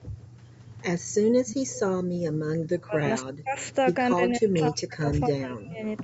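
From 1.46 to 1.79 s a faint copy of the speech trails the original by 257 ms, about 15 dB down, and it returns weaker, about 25 dB down, at 3.61 to 3.74 s. This is likely an echo leak from a far-end loudspeaker the echo canceller did not fully remove. The fixed delay is what separates it from room reverberation.

At 2.04 to 2.23 s the background is gated by the echo canceller. The room sound falls by about 40 dB for roughly a fifth of a second and then comes back. Only the background drops out, so this is not a gap in the speech itself.

The speech itself dips at 2.78 to 3.05 s (roughly 30 dB), at 3.21 to 3.58 s and at 4.15 to 5.83 s (both roughly 40 dB). The last dip lasts about one and a half seconds. This is likely speech suppressed in double talk, with the canceller turning the talker down while the other side spoke. Unlike gating, the voice itself dips.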